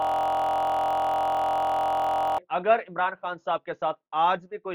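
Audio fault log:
0.00–2.38 s, system hang loop: a frozen 23.2 ms slice, fitting a 1024-sample buffer, repeats exactly from the start as a steady 43 Hz buzz, unlike irregular dropout stutter.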